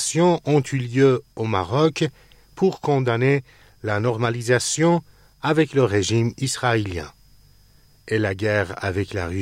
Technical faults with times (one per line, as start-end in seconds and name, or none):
1.37 block of digital silence